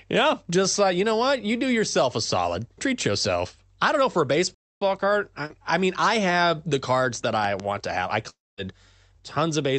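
At 4.54 s the speech stops dead for about 0.27 s, until 4.82 s. This is a playback stall. The player was likely starved of data or blocked, so output went silent.

At 5.46 s, just before "I mean I have", there is a short concealed packet loss. About 40 ms of the call arrived too late. The receiver stretched the preceding sound over the gap, then blended back. It is heard as a brief smear.

Between 7.44 and 7.62 s, after "have the cards that" and before "to have I", two loud pops sit on top of the speech. They peak about 10 dB above it. The likely cause is a sudden voltage step, from a switch, a plug or static. The speech carries on underneath.

At 8.29 s, right after "to have I", comes a long network dropout lasting until 8.60 s. Likely nothing arrived for about 0.28 s. The receiver continued the last sound as a fading buzz, and the gap then sinks into silence. The speech returns further on, with that stretch missing. 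Throughout, the speech carries the call path's codec colouring and has no content above 8 kHz.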